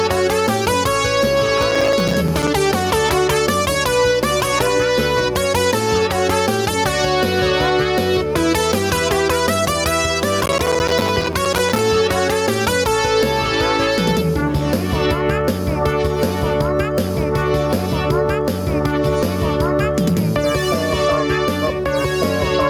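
The whole clip has gain pumping. The gain swings by around 10 dB, so everything sounds squashed and breathing. That's likely a mic gain set way too hot with a fast limiter or compressor clamping down on the peaks.

From 1.58 to 2.48 s, and again for longer from 10.44 to 11.79 s, there's processor overload crackle. A run of tiny silent gaps with hard edges turns into a gritty tearing over the sound. It fits a processor missing deadline after deadline on buffers of only a few milliseconds, and it clears once the load drops.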